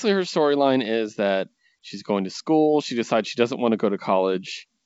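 Nothing faulty is audible anywhere in this speech recording.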